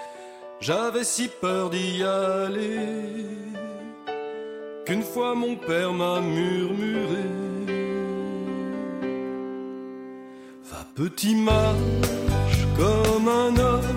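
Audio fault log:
No faults detected anywhere in the clip.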